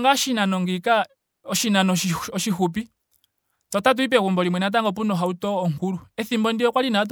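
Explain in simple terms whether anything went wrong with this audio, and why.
Nothing went wrong with this recording of speech. No technical problems can be heard at any point.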